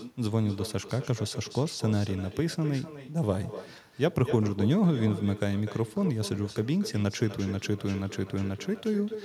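Speech runs through the whole clip with echo with no canceller: every phrase is followed by a fainter, thinner copy arriving roughly 300 ms later and sitting about 13 dB below the direct sound. The far end is playing the call through a loudspeaker, its microphone picks that playback up, and no echo cancellation removes it, so the talker's own audio returns after the network round trip.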